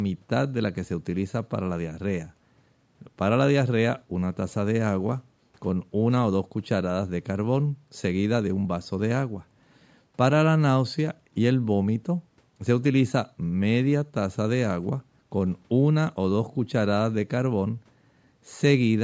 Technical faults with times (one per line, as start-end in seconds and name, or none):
none